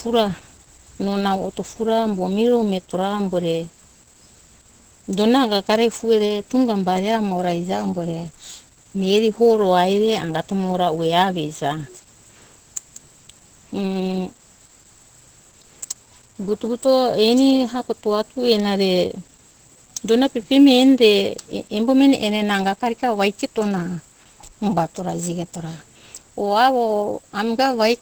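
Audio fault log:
throughout, Opus compression: a low-rate encoder, likely Opus in its SILK speech mode around 12 kbps, removes everything above 8.4 kHz, leaving speech muffled and hoarse.
throughout, sample clock jitter: the converter clock wanders by a few microseconds, mistiming samples and adding a hiss about 30 dB down, strongest on loud, bright sounds.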